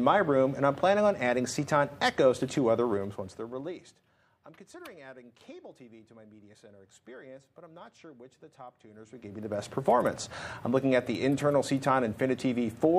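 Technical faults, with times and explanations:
2.88–4.19 s, zipper noise: the level falls by roughly 25 dB in unsmoothed steps of about 2 dB, around ten a second. Each jump clicks, so the sound ticks.
8.88–9.67 s, zipper noise: the level climbs roughly 25 dB in steps of about 2 dB, nearly fifteen a second. Each abrupt step clicks, giving a fast zipping.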